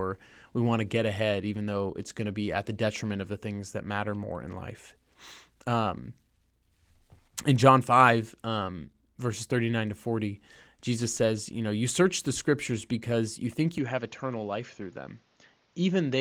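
An input switch to a poorer device comes at 13.78 s, right after "scriptures because you think", and lasts to the end of the clip. With no gap at the join, the speech suddenly loses its top end, with nothing above about 6.9 kHz, and turns duller and boxier. It drops to a slightly lower level, and a new noise floor appears well beneath it. The likely cause is the recording path changing microphones mid-take, while the light Opus coding stays steady across the change.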